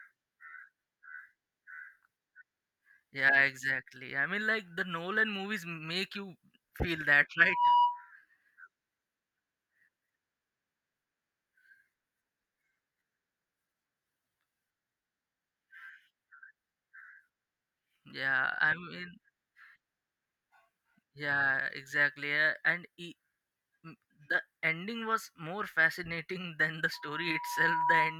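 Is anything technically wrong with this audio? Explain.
Yes. Loudspeaker feedback squeal occurs at 7.39 to 8.11 s and again from 26.93 s, just after "than the", to the end. The microphone picks up its own loudspeaker, and at 972 Hz the loop gain exceeds one. A pure tone swells quickly, well above the speech, the first time; later it builds more slowly and less loudly.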